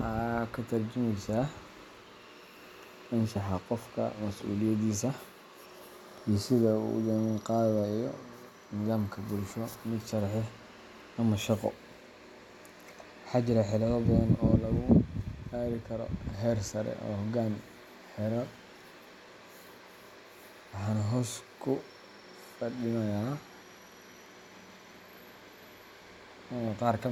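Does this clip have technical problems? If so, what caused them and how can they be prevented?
No, there are no technical problems to report in this speech recording. Nothing here needs a cause traced or a preventive step taken.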